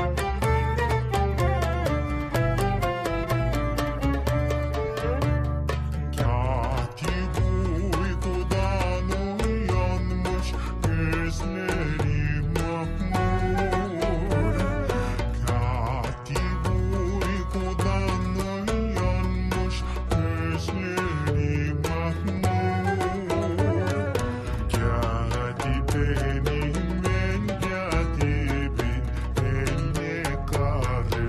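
The audio runs at its proper rate until 6.26 s. From there to the end, a section at the wrong speed takes over. Playback drops to 0.835 times the original rate. Speed and pitch fall together, so everything sounds slower and deeper, roughly three semitones lower. The change is abrupt, not gradual. This is likely a clock mismatch, where the later part was played or resampled against the wrong clock rate.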